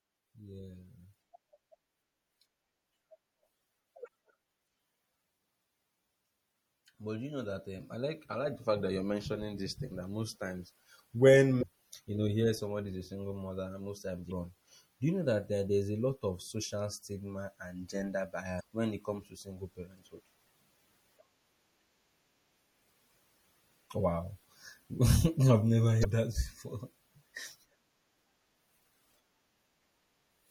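Throughout the speech there is a watery, swirling texture with smeared consonants, most likely from MP3 compression, which fits a 64 kbps encode. A spectrogram shows the treble cut off flat and sparse, blotchy high-frequency patches flickering between frames.

Damaged data in a compressed stream appears at 4.04–4.08, 11.59–11.63, 14.28–14.32, 18.56–18.61 and 26.01–26.05 s. Each is a brief squawk or blip where the decoder loses sync, often jumping ahead. On a spectrogram each is a narrow vertical smear of broadband energy, and the waveform shows a short discontinuity.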